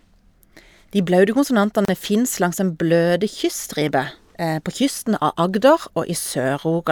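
A gap at a join of encoded pieces opens at 1.85 to 1.88 s: separately encoded segments were spliced untrimmed, leaving a 34 ms gap with smeared edges before the speech resumes.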